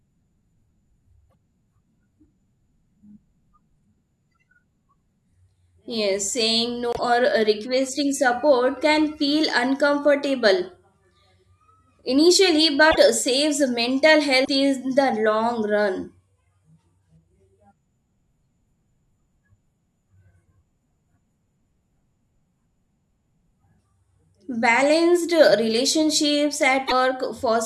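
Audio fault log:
1.29–1.35 s, 6.93–6.99 s, 12.90–12.97 s, 14.44–14.49 s, 26.87–26.92 s: broken MP3 bit reservoir. Each is a 48–64 ms garbled disturbance, two to three 24 ms frames long. The likely cause is removed frames: the following frames reach back for reservoir bytes that are gone and decode them from another frame's data. A plain dropout gives only a gap or clean skip, not this brief corrupted stretch.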